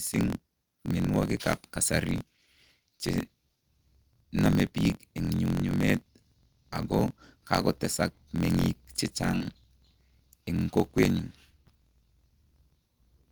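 From the start the speech carries a steady buzz at about 43.1 Hz, the mark of a block size mismatch (truncated). One stage hands over longer blocks than the next one reads, and the tail of each block is discarded. The rate fits a 1024-sample read. Because audio is thrown away, the speech runs about 1.12 times fast, yet its timbre stays put. That separates it from a sample-rate error, where speeding up would also raise the pitch.

Around 9.31–9.35 s and again at 9.38–9.42 s there are two short concealed packet losses, each about 20 ms of missing audio. The receiver covered the holes by extending the preceding sound for roughly 19 and 25 ms, then crossfading back into the real signal. The result is two quick smeared wobbles close together rather than silent gaps or clicks, which distinguishes concealment from a plain dropout.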